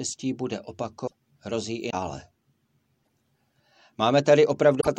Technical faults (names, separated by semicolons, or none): broken MP3 bit reservoir